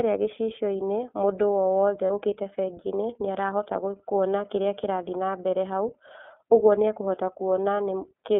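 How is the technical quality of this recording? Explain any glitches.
The recording is narrowband and noticeably coded, with one brief dropout near the start.

The iLBC codec runs throughout this speech. Only about 250 Hz to 3.4 kHz survives, so the sound is thin and boxy, and the coding damage is plainly audible as a rough, slightly synthetic edge. iLBC codes each 30 ms block independently, which fits its 13.33 kbps mode. Unlike a smoother predictive codec, it leaves a grainy texture without the watery, swirling sound of heavy perceptual coding.

Lost iLBC frames appear at 2.07 to 2.10 s, just after "mũndũ owothe". That 30 ms gap fits a single missing frame. The decoder fills it by repeating the last pitch cycle blended with noise, so it sounds like a short, slightly buzzy held vowel rather than silence or a click. Because each frame stands alone, clean speech resumes immediately. Concealment in codecs that depend on earlier frames leaves a smeared recovery that trails on after the gap.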